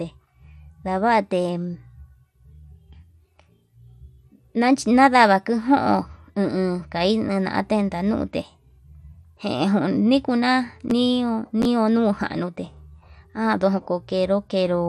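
From start to finish the speech carries plainly audible MP2 compression damage, likely from MPEG Layer II encoding at a rate that fits about 80 kbps. Starved of bits, upper sub-bands drop out and flicker while the rest are coarsely quantised, leaving the sound dull and gurgling.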